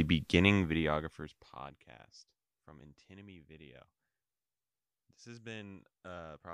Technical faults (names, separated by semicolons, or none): zipper noise